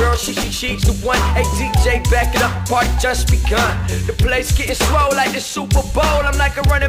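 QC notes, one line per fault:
0.75–2.25 s, sample clock jitter: an unsteady converter clock, around a microsecond of timing wobble, adds a grainy hiss roughly 40 dB below the sound, strongest on loud, bright passages.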